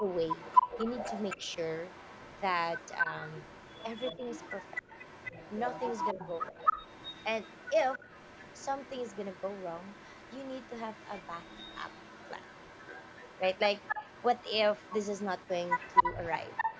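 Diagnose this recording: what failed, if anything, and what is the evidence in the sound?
Echo leak, at the call-processing stage. A delayed copy of the speech trails it by about 263 ms, from 0.07 to 2.42 s and again from 2.77 s to the end. It sits roughly 10 dB below the speech at first, then nearer 15 dB. The far end's echo canceller likely left residual loudspeaker pickup.

Speech suppressed in double talk, also in call processing. The speech dips briefly at 3.03–3.13 s, 4.17–4.21 s and 16.02–16.06 s, each by a few dB. A deeper drop of around 15 dB hits between 6.14 and 6.58 s. The canceller likely attenuated the talker while treating the overlap as echo.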